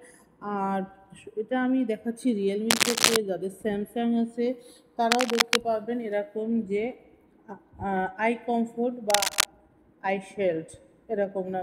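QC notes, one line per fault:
2.70–3.17 s, 5.11–5.56 s and 9.10–9.46 s: cable scratch noise. Three bursts of dense, ragged scratching, each about 0.4 to 0.5 s long, sit over the sound. The first is a little louder than the programme and the later two are roughly level with it. This is likely a worn cable, connector or control being moved, so the contact resistance jumps around rapidly. Unlike clipping distortion or periodic clicks, the noise ignores the signal's peaks and has no regular rhythm.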